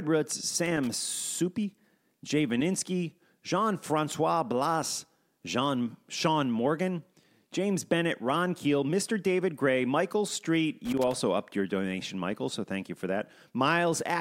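A speech recording with loose connector crackle in two irregular bursts, from 0.66 to 0.87 s and from 10.85 to 11.15 s, the second just before "upped your donation". A worn or dirty contact is intermittently breaking the signal path, chopping the audio into scratchy fragments.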